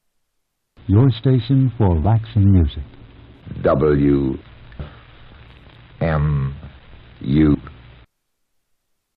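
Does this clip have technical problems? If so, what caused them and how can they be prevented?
Yes. At 2.05, 4.80 and 7.55 s the audio skips forward, most likely from audio missing between chunks: about a third of a second is lost at each join of roughly 3 s blocks and the edges are butted together. Unlike a dropout, no silence fills the gap. To prevent it, record continuously or overlap the buffers so that nothing is discarded while one chunk closes and the next opens.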